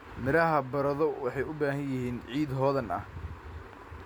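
Nothing goes wrong anywhere in this bit of speech, so there's no technical fault to point to at any moment.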